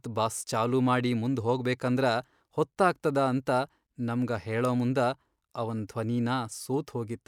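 No technical faults are audible.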